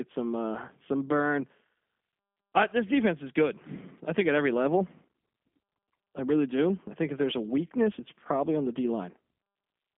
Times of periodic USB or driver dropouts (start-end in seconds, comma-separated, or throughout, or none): none